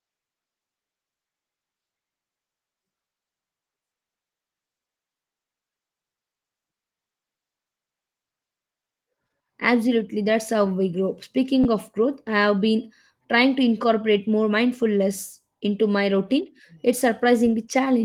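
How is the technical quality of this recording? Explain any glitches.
Two brief stutters mark the speech, at 0.97 s and from 11.64 to 11.66 s. Each is a repeated buffer: new audio arrived late, so the device replayed its last 10.7 ms chunk, which fits a 512-sample buffer. That chunk plays twice at the first glitch and three times at the second, with a hard join at each repeat. Light Opus voice compression is present throughout.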